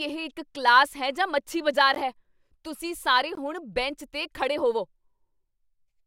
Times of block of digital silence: 1.95, 3.35

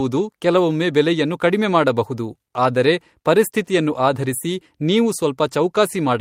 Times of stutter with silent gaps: none

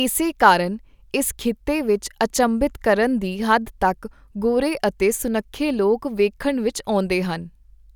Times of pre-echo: none

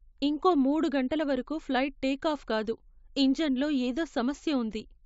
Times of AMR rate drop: none

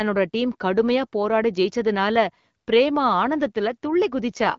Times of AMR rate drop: 4.29-4.58

